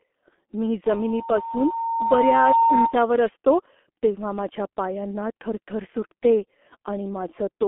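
Right from the start the speech carries heavy G.723.1 codec damage. The low-rate coder works in 30 ms frames and updates its voice model only slowly, so consonants smear and the tone turns hoarse and muffled. The muffled, papery quality fits a rate of around 6 kbit/s. The band sits roughly between 250 Hz and 3.5 kHz, and nothing comes through above 3.8 kHz, which leaves the whole clip sounding boxed-in and grainy.

Then at 0.86 s a loudspeaker feedback squeal kicks in and lasts until 3.00 s. The mic is hearing the speaker it feeds, and at 916 Hz the loop gain tips past one, so that single tone keeps feeding itself. You can hear it swell over about a second and a half until it sits a few dB above the speech, a steady whistle riding on top of everything until it stops.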